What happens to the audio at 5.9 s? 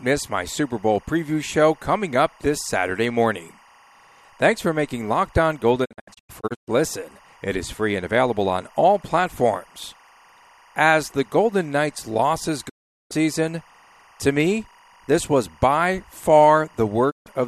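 At 5.9 s the speech falls into a digital broadcast dropout lasting from 5.84 to 6.69 s. The receiver mutes whenever frames fail, so about 456 ms of sound vanishes in several holes, the longest 120 ms. Quick 20 ms fades, not clicks, set it apart from a broken cable.

Timecode bleed runs under this moment, as it does throughout the clip. It is a chirping warble switching between about 1 kHz and 2 kHz, some 30 dB below the speech, and that octave alternation distinguishes it from a steady hum or whistle.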